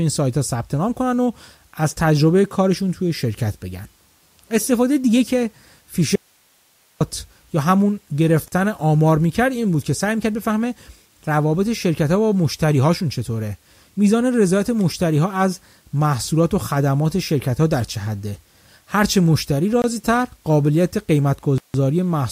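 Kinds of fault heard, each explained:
Audio dropout to a faint residue: from 6.16 to 7.01 s, about 850 ms, the speech cuts out abruptly and only hiss remains, roughly 40 dB below the signal. This is likely a break in the signal path while the downstream chain stayed live.
Block of digital silence: at 8.48 s (40 ms), 19.82 s (21.4 ms) and 21.58 s (160 ms), stretches of the audio drop to silence with no fade. The shorter ones sound like short holes and the longest like a gap.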